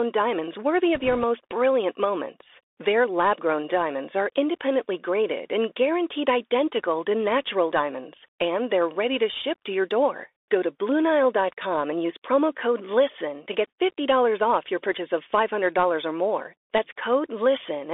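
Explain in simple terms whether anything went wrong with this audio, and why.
Yes, two things went wrong. The whole recording went through a Bluetooth CVSD headset codec, the narrowband kind used by phone headsets. It keeps only a thin slice of sound, roughly 300 Hz to 3.6 kHz. Everything sounds muffled and boxy. The damage is plainly audible: s sounds turn scratchy, and a fine grainy hiss sits underneath.

There are also bit errors on a Bluetooth voice link, from 0.95 to 1.24 s. This falls right after "diamonds worthy" and before "brilliant moments". A small share of the transmitted bits, around one or two in a hundred, were flipped. You hear a brief rushing crackle, but no loud clicks.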